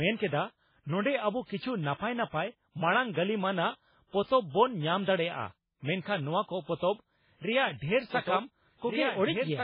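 From the first moment the speech has that watery, swirly quality you get when weak frequency components flicker in and out from frame to frame, and nothing comes through above 5.2 kHz, so the top end is simply gone. The likely cause is MP3 compression, and the damage is heavy, which fits a very low bitrate somewhere around 16 kbps. At that rate the encoder is throwing away a lot of detail, and attacks sound smeared as well.

At 8.13 s a doubled audio track kicks in and runs to the end. A second full-band copy of the speech sits underneath, about 5 dB quieter and trailing by roughly a second and a half. It starts abruptly and carries no decay or room colour, so it doesn't sound like an echo. It's more likely a second capture path or an edit that left two copies out of step.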